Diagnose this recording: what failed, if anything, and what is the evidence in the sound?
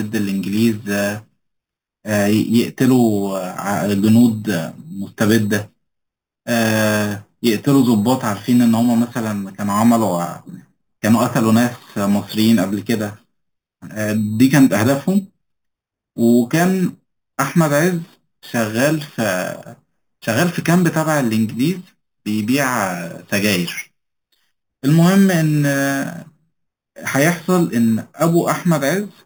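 Imaging from sample-and-hold upsampling, at the sample-rate conversion stage. A bright metallic fizz rides on the speech throughout, filling 4 to 8 kHz at about 18 dB below the signal. This fits 8 kHz audio raised to 48 kHz by repeating samples without smoothing, leaving mirrored spectrum copies.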